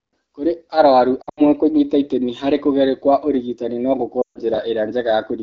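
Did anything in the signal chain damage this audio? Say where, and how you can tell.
Yes. Lost AMR speech frames appear at 1.22 to 1.46 s, just before "kũnyita itemi harĩ kũgerio", and again at 4.21 to 4.38 s, right after "kũgerio kwa ũrigitani no". This is the radio or network stage. Each gap holds about 140 ms of missing audio, which fits seven 20 ms frames. In the first gap the losses are scattered across 160 ms, and the longest run is 80 ms. The AMR-WB decoder hides each gap by repeating its last pitch and spectral settings at falling gain. That is why the sound drops to near silence within a couple of frames, then comes back weak for a moment.

Chunks out of order occur at 4.54 to 4.58 s, a storage or buffer-writing fault. A 20 ms chunk lands one chunk late and swaps places with its neighbour. No audio is lost, but the sequence is scrambled. The result is a short jumbled stutter with three hard splice points, where the waveform jumps between sections that don't line up.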